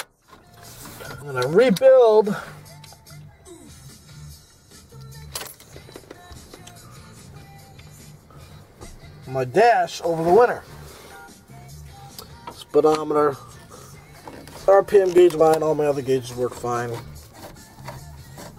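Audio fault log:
1.21 s and 15.40 s: compressed frames skipped. At each point the audio jumps forward, by roughly 400 ms (about twenty frames) at 1.21 s and roughly 300 ms at 15.40 s. Whole frames of the coded stream, each 23.2 ms long, were not played because they were missing or rejected as damaged.
1.53 s, 10.04 s, 15.18 s: dropped samples. Each is a single sharp click that shows as a thin vertical line across the spectrum. The likely cause is a tiny gap in the sample stream, roughly 0.4 ms, so the waveform steps abruptly from one value to a later one. That is too short to remove any audible sound. Only the discontinuity itself is heard.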